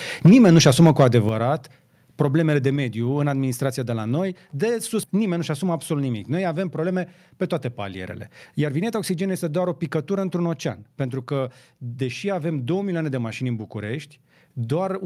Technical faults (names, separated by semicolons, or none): microphone overload; microphone volume stepped down; skip ahead; jitter buffer speed-up